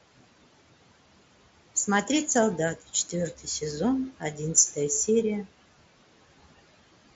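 Throughout this speech clip the background noise pumps, dropping away between phrases and swelling back under the talking. These are noise suppressor artifacts: the suppressor judges each frequency band frame by frame and pulls steady noise down by about 18 dB, so the room noise, which sits about 18 dB under the speech, keeps switching between cut and uncut. From 3.33 to 3.62 s the sound briefly turns faint and swallowed, dipping by up to about 12 dB over roughly a tenth of a second in total. This is speech cut by the noise suppressor, which mistook quiet parts of the speech for noise and turned them down with the background. The top end stops near 7.8 kHz, as expected from the mSBC Bluetooth headset codec.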